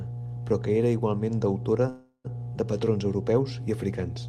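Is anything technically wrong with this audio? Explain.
Yes, there are two problems.

A steady low tone at 60 Hz runs under the whole clip, loud enough to sit only a little below the speech itself. This is mains hum: the power line is leaking into the signal path, which points to a ground loop or a transformer close to the cabling or equipment. Its constant pitch and level make it easy to pick out behind every phrase, including the pauses.

From 1.89 to 2.26 s, just after "que era igualment deutora", the speech stops advancing. The last sound is stretched into a fading continuation for about 0.35 s, with roughly 50 ms of silence at the end, before speech picks up exactly where it left off. This is a call audio freeze, likely caused by packets arriving late and the receiver's jitter buffer running dry. The receiver filled the gap by extending what it already had. Nothing is lost, but everything after that point arrives about 0.35 s later.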